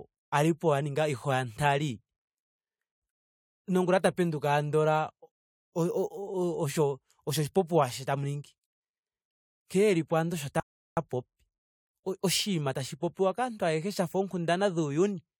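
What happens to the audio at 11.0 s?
At 11.0 s the speech resumes after a rebuffering stall from 10.6 to 10.97 s: the player ran out of downloaded audio and went silent for about 0.37 s. Unlike a dropout, nothing is skipped; the sound picks up exactly where it stopped, adding time rather than losing it.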